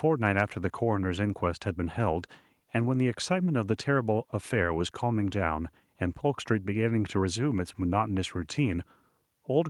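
No technical faults are audible anywhere in the recording.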